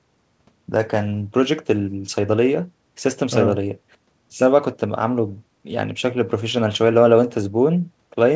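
There are no technical faults to describe in this speech clip; it has come through a G.722 call path, which is why nothing is heard above 8 kHz.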